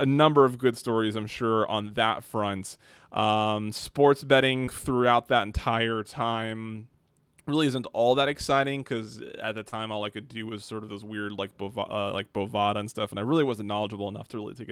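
Short concealed packet loss at 4.65–4.69 s, before "throughout that entire time", and 9.69–9.74 s, after "exciting because at the". Late packets were patched by extending the preceding sound, leaving brief smears.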